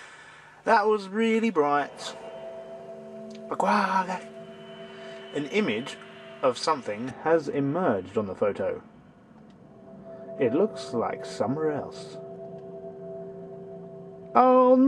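From 7.11 s to the end, the sound goes dull and muffled. That's de-emphasis applied wrongly: a treble-cut curve was applied where no pre-emphasis existed, or applied twice, so the top end slopes smoothly away, sitting about 11 dB down at 10 kHz relative to 1 kHz.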